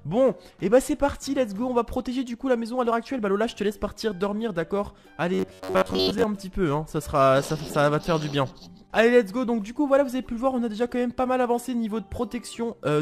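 From 5.34 to 6.25 s, new audio likely arrived too seldom, so playback kept looping a roughly 10.7 ms buffer in place of most of the real signal. This robotic sound from repeated short buffers stamps a rigid, metallic 93.8 Hz buzz onto the sound.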